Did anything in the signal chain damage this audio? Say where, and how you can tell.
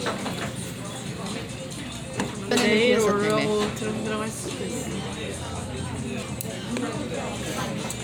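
Yes: brief glitches at 2.51 s and 6.22 s point to damaged data in a compressed stream at the codec stage. Corrupted bytes in the encoded file made the decoder misread those frames and lose sync until it found the next valid frame header.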